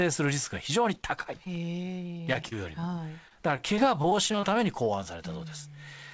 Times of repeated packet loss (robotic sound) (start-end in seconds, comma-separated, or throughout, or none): 0.94-1.47, 2.17-2.84, 3.28-4.44